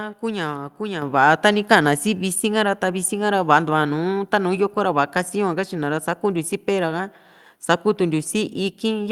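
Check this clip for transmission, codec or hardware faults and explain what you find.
One fault stands out: a microphone volume step-up at 1.02 s. The speech and the background noise behind it jump together, suddenly, by about 6 dB, and the louder level holds from then on. Because everything rises at once rather than just the voice, the change comes from the input path, not the talker. The call software judged the microphone too quiet and raised the device's input volume in a single step instead of gradually.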